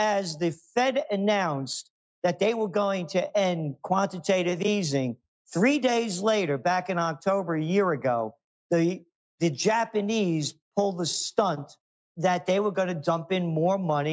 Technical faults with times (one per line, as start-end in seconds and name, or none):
none